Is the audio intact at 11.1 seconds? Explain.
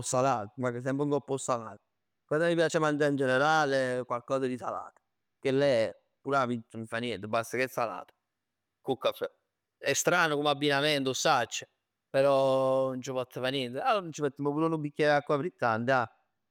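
No. Dropped samples at 11.06 s: the speech waveform likely skips ahead by a handful of samples, well under a millisecond of signal, so it jumps abruptly to a later value. No sound is removed, but the jump is heard as one sharp click.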